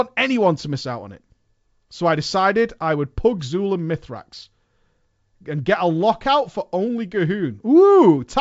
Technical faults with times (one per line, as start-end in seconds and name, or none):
none